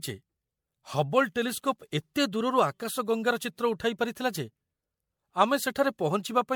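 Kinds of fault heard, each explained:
Generation loss: the speech sounds swirly, smeared and hollow throughout, with blurred attacks, worse than one encode would leave. It's likely MP3 re-encoded around five times at what sounds like 96 kbit/s, each pass requantising on a shifted frame grid so damage stacks.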